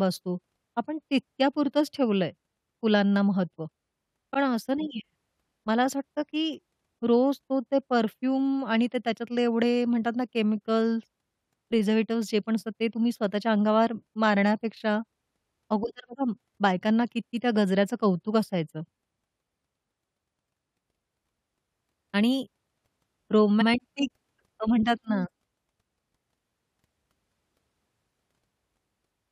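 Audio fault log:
4.33–4.35 s, repeated frames: a 23.2 ms slice plays twice, which fits a single compressed frame being duplicated. It is heard as a brief stutter. On the waveform a short segment recurs.
23.60–23.67 s, repeated frames: a longer 69.7 ms block plays again, which points to about three consecutive frames being resent. The waveform shows an identical pattern twice in a row. Together the two repeats add 92.9 ms to the clip.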